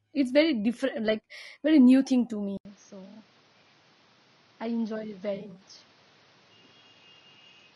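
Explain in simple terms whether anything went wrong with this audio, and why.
Low-delay AAC compression, throughout: the speech sounds rough and grainy from start to finish, likely because a video-call-style codec squeezed it into very short chunks with too little data.

Input switched to a poorer device, at 2.57 s: after a brief gap of about 80 ms, the speech turns duller, quieter and hissier, with nothing above 6.5 kHz. That fits a likely change to a lesser microphone.

AAC frame loss with concealment, 5.35 to 5.61 s: about 140 ms of audio went missing in short pieces spread over that stretch. The decoder filled the gaps from the last good sound, leaving a smeared, noisy patch.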